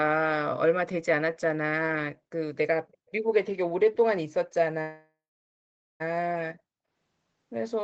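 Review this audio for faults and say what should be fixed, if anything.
An echo leak, likely from a far-end loudspeaker the echo canceller didn't fully cancel, sends back a very faint copy of the speech, delayed about 252 ms, from 2.93 to 3.12 s. Tighter echo-canceller tuning or headset use would prevent it.

A call audio freeze, likely from delayed packets draining the jitter buffer, inserts a 1.19 s gap from 4.81 to 6.02 s. Most of it, about 0.83 s, is silence. The speech then resumes late with nothing lost. A more stable network path or a deeper jitter buffer would prevent it.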